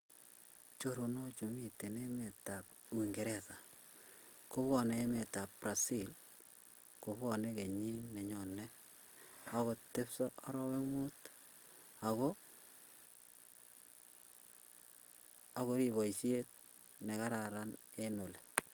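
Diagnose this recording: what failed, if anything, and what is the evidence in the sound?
Nothing failed in this recording, and the sound gives no evidence of a fault at any stage.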